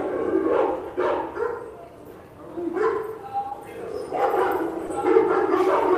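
Brief smears at 3.49 and 4.87 s are short concealed packet loss: roughly 20 ms of audio arrived too late and was filled by extrapolating the preceding sound.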